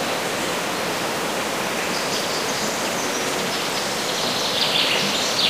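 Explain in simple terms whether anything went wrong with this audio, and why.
Nothing went wrong; these sounds have no faults.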